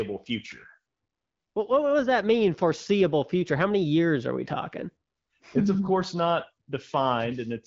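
Nothing's wrong here: it's a speech clip carried over the AMR wideband (HD Voice) codec at 12.65 kbit/s, with no technical fault to point to anywhere in it.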